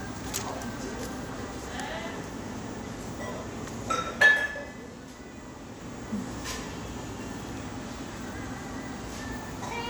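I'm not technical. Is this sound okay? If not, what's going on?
Yes, no faults here.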